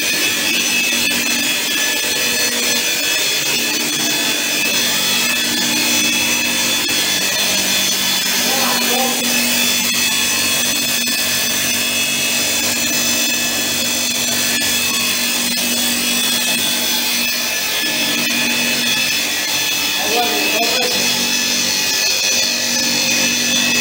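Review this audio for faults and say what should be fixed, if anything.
Lost LE Audio frames at 9.18–9.21 s, 10.70 s and 17.76–17.80 s: the LC3 decoder replays the last spectrum with scrambled signs, smearing tones into noise. Prevent this by improving the Bluetooth link margin or adding retransmission headroom.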